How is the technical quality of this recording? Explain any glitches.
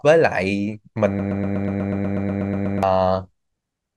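The recording has one clear glitch.

A broken-record loop runs from 1.19 s to 2.83 s. A fragment of the speech about 122 ms long repeats exactly, back to back, 13 times, giving a rapid stuttering buzz in place of the speech. The likely cause is a stalled player, encoder or stream that kept resending the last fragment it held. The speech that belonged in that stretch is lost.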